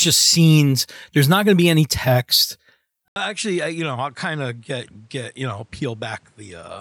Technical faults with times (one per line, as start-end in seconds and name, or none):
3.08-6.80 input switched to a poorer device